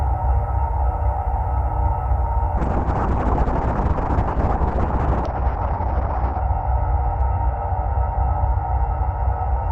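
At 2.59 s a call bitrate drop sets in: the bandwidth estimate collapsed and the encoder was forced to code far more coarsely, which fits a fall from 48 to 6 kbps. The sound turns rough and watery, muffled above 6 kHz, and never recovers before the end.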